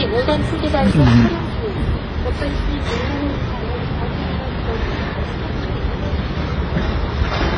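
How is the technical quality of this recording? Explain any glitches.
Quality is poor throughout. The audio is dull, with nothing above 10.3 kHz and layered smeary, warbling artefacts, likely from transcoding between lossy codecs, passing through several low-bitrate HE-AAC and WMA stages that stack their artefacts.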